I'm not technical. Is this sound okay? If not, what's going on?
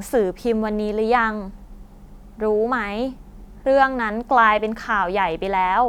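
Yes, this sound is okay; there's nothing wrong going on in it.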